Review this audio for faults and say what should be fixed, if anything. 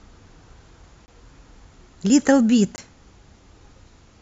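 Two blocks of digital silence, at 1.06–1.08 s and 2.76–2.78 s, each a 20 ms hard dropout to silence, pointing to an output buffer not filled in time. Give the audio thread more headroom with a larger buffer or lighter processing so it never runs dry.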